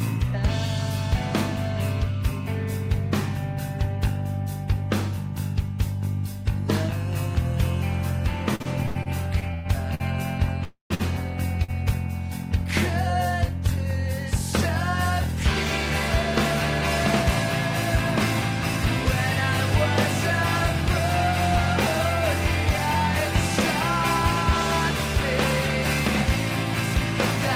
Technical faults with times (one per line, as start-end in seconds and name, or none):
8.55-10.02 repeated stalls (stutter)
10.64-10.92 call audio freeze
10.94-11.02 short stall from a late packet
11.64-11.70 short stall from a late packet